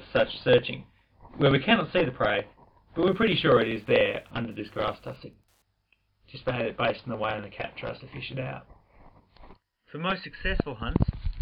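From about 2.98 s to 5.62 s there's Wi-Fi interference: a nearby radio's beacon, every 102.4 ms, gets rectified by the audio circuit, so you hear a faint, steady ticking roughly ten times a second, sitting well down under the sound.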